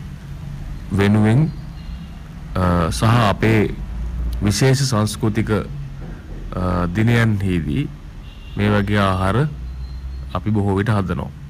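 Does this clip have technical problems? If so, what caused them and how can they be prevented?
Yes. Microphone overload, likely from an input volume set too high, drives the loudest peaks past the converter's ceiling so their tops are flattened. The result is a harsh, crackling edge on the strongest syllables from 0.94 to 1.43 s, 2.56 to 5.58 s, 6.56 to 7.79 s, 8.59 to 9.41 s and 10.35 to 11.14 s. The signal runs about 9, 11, 8, 7 and 5 dB over the limit in those spans. The first span is worst, with roughly a fifth of its samples clipped. Lowering the microphone's input level until peaks sit comfortably below full scale prevents this.

The microphone volume is stepped down twice, likely by the call software's automatic gain control reacting to the clipping. Each time it cuts the device's input level in one jump of about 3 dB, at 1.01 s and again at 4.63 s. The voice and the background both drop abruptly at those moments, in the middle of overloaded passages. 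Setting a correct input level beforehand, or disabling automatic microphone adjustment, avoids these sudden drops.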